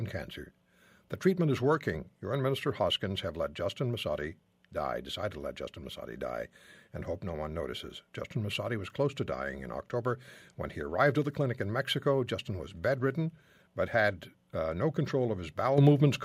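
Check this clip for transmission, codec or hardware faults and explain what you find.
One fault is present: a microphone volume stepped up at 15.78 s. Right there the whole signal jumps about 7 dB louder in a single step, speech and room noise together. This happens when automatic gain control judges the input too quiet and raises the device's input volume at once rather than gradually. On a waveform the envelope widens abruptly; on a spectrogram every band, including the noise floor, brightens at the same instant.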